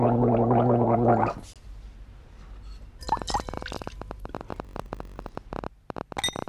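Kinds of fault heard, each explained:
Corrupt frame muted: Damaged bits in one compressed frame made the decoder reject it, and the player substituted silence. The result is an abrupt 40 ms hole from 1.53 to 1.57 s, one frame long, after which the sound resumes with its timing unchanged.
Train of clicks: Something is injecting pulses into the signal, likely interference or a struggling interface. From 3.09 s to the end, roughly fifty similar clicks arrive at an uneven pace of about 14 per second, ticking out noticeably above the sound itself.
Block size mismatch (padded): One stage is writing shorter blocks than the next stage reads 1024 samples at a time, so the shortfall in each block is filled with zeros. Between 4.52 and 5.39 s this puts a buzz at 46.9 Hz and runs the audio at 0.938 speed with pitch roughly unchanged.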